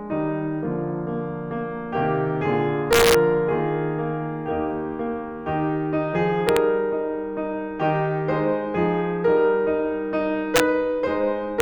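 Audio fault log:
2.93–3.15 s, 6.49–6.57 s, 10.56–10.60 s and 11.60 s: integer overflow. Loud passages of the music pushed the signal past the largest value the integer format can hold. The sample values wrapped around to the opposite sign instead of being limited, so each peak over the ceiling jumps across the full range. Each event is a violent crack, much harsher than clipping. The overshoot was about 3 dB at the first event, about 1 dB at the second, about 2 dB at the third, and only barely over the limit at 11.60 s.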